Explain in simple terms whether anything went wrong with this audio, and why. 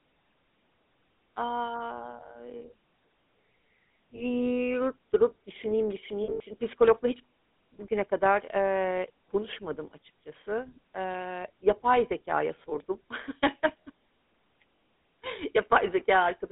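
The speech went through the GSM full-rate codec, an old mobile-phone coder that rebuilds voices from a simplified model, so they sound buzzy, gravelly and dull above phone bandwidth. Lost GSM frames at 4.16–4.24, 6.24–6.41, 12.70–12.73 and 14.76–14.78 s were patched by repeating the last good frame, giving brief metallic rings.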